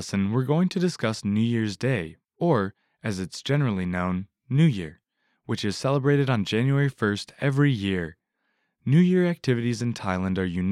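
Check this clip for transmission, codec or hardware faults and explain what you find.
Nothing faulty turns up anywhere in this speech recording.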